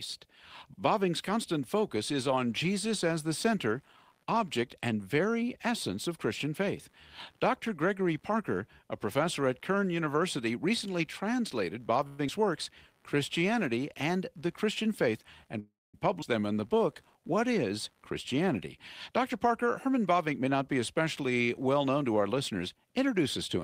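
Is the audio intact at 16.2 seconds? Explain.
No. A skip ahead occurs between 16.22 and 16.24 s. About 150 ms of speech was dropped, either in transit or by an overflowing jitter buffer, and the two sides are joined with only a 3 ms fill. Playback lurches forward. On a spectrogram, formant tracks break off and resume misaligned at a sharp vertical seam. The waveform shows an abrupt splice.

Computer activity noise is also present here. It runs from 1.79 s to the end as a faint buzz pulsing at about 70 Hz, roughly 40 dB below the speech. Processor or peripheral load modulates the shared ground. It appears as weak, fluctuating horizontal bands at 70 Hz multiples.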